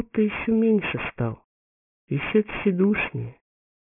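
The whole clip has aliasing. Anything above about 3 kHz has folded back down into the band instead of being filtered out, so the high end comes through as gritty, metallic tones at the wrong pitches. The top of the spectrum runs hard right up to that 3 kHz edge, which fits the sound having been resampled from 48 kHz down to 6 kHz with no anti-alias filter. The folded content is fairly strong, sitting not far below the actual sound.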